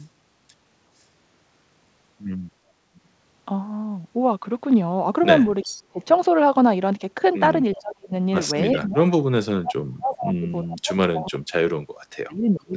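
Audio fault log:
2.95–3.0 s, 5.63–5.82 s and 7.71–7.77 s, echo leak: the echo canceller on the side playing the call through a loudspeaker likely failed to remove all of what its microphone picked up, so part of the far voice was sent back. Each time, a copy of that voice returns about 377 ms late, at about 35, 15 and 25 dB below the speech respectively. The audio carries nothing above 8 kHz, which fits a G.722 call path at 64 kbps.
5.7–6.0 s, 7.74–8.12 s, 8.75–9.05 s and 9.46 s to the end, speech suppressed in double talk: with far-side sound on the loudspeaker while this side talked, the echo canceller likely could not tell its own talker from the echo and turned both down. The voice dips by about 30, 40, 25 and 40 dB in turn, and the last stretch stays held down until the clip ends.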